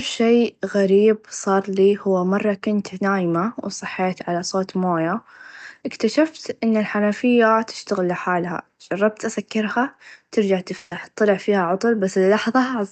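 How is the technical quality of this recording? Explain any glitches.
The recording has one clear glitch, in speech that passed through a call codec whose top end stops around 8 kHz, which fits Opus at a modest bitrate.

Burst of packet loss, 10.77 to 10.93 s: right after "لحالها چربت أسكرها ترچع", a run of audio packets never arrived in time. The receiver papered over the hole by extending and fading the last sound for about 140 ms, producing a brief held buzz or hiss. Speech resumes at "طلع فيها", with roughly 140 ms of the original simply gone.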